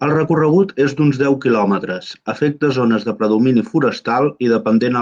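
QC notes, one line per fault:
Nothing to flag on this speech clip, as I heard no faults anywhere in it.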